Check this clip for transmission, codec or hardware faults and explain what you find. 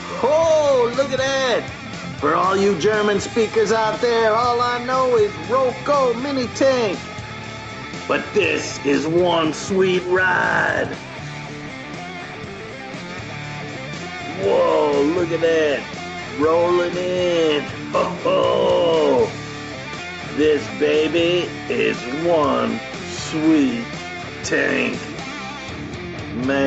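Nothing to flag: the audio is band-limited to 8 kHz by the call's microphone processing and codec path, which is expected behaviour for the link, and no transmission, codec or hardware fault can be heard.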